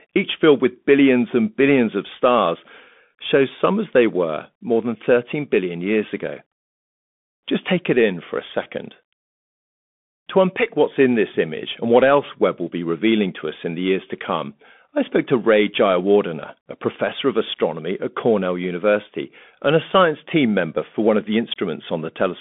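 Bluetooth CVSD headset codec, throughout: the speech is carried as one bit per sample saying up or down, with an adapting step, which fits a 64 kbps link. Nothing above 3.7 kHz survives, s sounds turn scratchy, and a granular hiss sits beneath.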